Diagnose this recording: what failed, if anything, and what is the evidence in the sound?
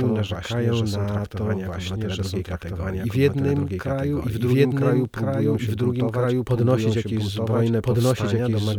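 A doubled audio track runs through the whole clip. A second, full-band copy of the speech follows about one and a half seconds behind, at roughly the same level as the original. It has no decay and no added room colour, so the two layers simply overlap. The likely cause is at the capture or routing stage: the same signal reaches the mix twice, once through a slower path, or an edit holds two misaligned copies.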